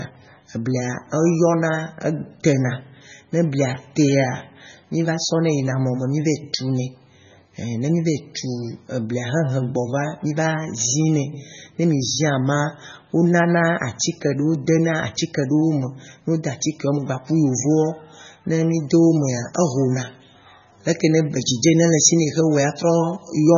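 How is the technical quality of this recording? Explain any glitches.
The technical quality is poor, with heavy compression throughout and a bright tonal shift near the end.

MP3 compression: throughout the speech, nothing sounds above 7 kHz and the texture is watery. This is likely a starved encoder near 16 kbps; unlike a plain low-pass, it swirls.

Pre-emphasis left on, 18.74 to 23.4 s: the treble is boosted by a curve rising about 10 dB at 10 kHz relative to 1 kHz, fitting an uncorrected 50 µs FM boost. It sounds thin and sibilant, a steady tilt rather than flickering artefacts.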